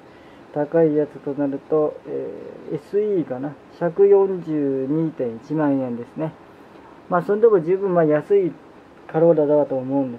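No technical faults can be heard anywhere in the audio, and the signal holds steady throughout with nothing that points to a problem in how it was captured, processed or delivered.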